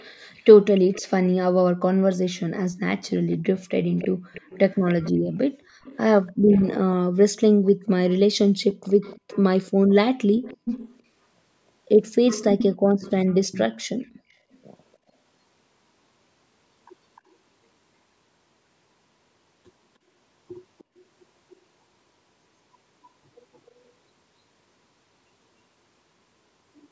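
An echo leak, likely from a far-end loudspeaker whose echo canceller let part of its microphone pickup return, puts a copy of the speech 303 ms behind at 0–1.0, 3.1–6.7, 7.7–11.0, 12.3–14.6, 17.16–17.21 and 20.8–21.6 s. It sits about 20 dB below the speech, strongest at 12.3 s at about 10 dB below, and barely audible near 17 and 21 s.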